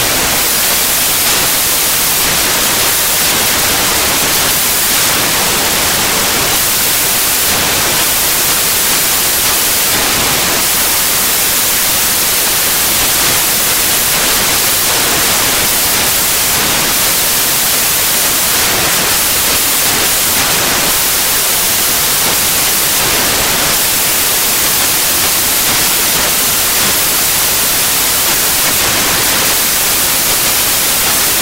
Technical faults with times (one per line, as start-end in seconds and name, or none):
0.00-31.42 samples built from the wrong bytes